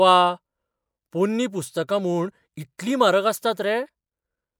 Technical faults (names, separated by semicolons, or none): none